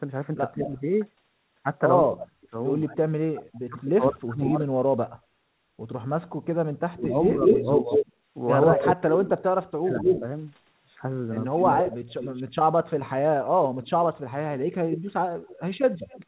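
From 0.55 to 4.78 s the speech is repeatedly pushed down, about 40 dB at its deepest and roughly two seconds in total, while the far side talks over it. This is speech suppressed in double talk, likely caused by an echo canceller that could not tell the near talker from its loudspeaker echo and turned everything down.

Within that stretch, at 0.67 to 0.81 s and again at 4.42 to 4.65 s, short echo leak scraps come through: copies of the speech delayed by 194 ms and 204 ms, about 15 dB and about 10 dB below it. A second double-talk suppression runs from 6.89 to 11.84 s, about 30 dB deep and again roughly two seconds in total. From 7.03 s to the end, an echo leak delayed by 223 ms sits at about the same level as the speech. A delay this long is heard as a distinct repeat, not as room reverberation, and the likely cause is residual loudspeaker pickup that was sent back. All of it is band-limited to 4 kHz by the call's G.711 coding, which fits a 64 kbps path.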